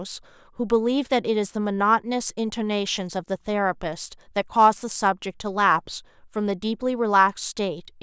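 A speech recording with no technical faults to report. Nothing in the audio calls for a timestamp or an explanation of cause.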